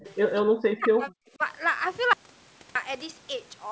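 From 0.00 to 0.14 s a faint echo leak sits under the speech: a delayed copy trailing by 212 ms at about 25 dB below it, likely a loudspeaker's sound slipping past an echo canceller. The fixed lag and separate character distinguish it from room reverberation, which would smear continuously.

Between 0.41 and 1.13 s the speech is suppressed in double talk, sinking by up to roughly 40 dB for most of that stretch, with a shallower dip of about 10 dB at 1.38 to 1.45 s. It likely comes from an echo canceller ducking a talker during simultaneous speech.

From 2.13 to 2.75 s an audio dropout to silence removes 0.62 s entirely. The gap is silent with no room tone, likely a lost input. That dead floor separates it from suppression, which leaves attenuated sound behind.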